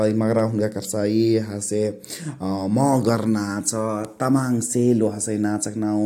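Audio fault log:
No faults heard anywhere in this speech recording.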